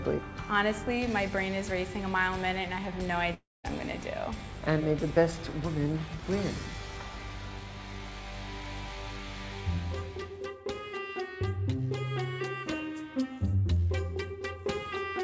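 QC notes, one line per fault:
3.34–3.66 s, long network dropout: the audio breaks off and the last bit gets stretched into a fading buzz or hiss, followed by 190 ms of silence. When it comes back, 300 ms of audio is gone, most likely packets that never arrived.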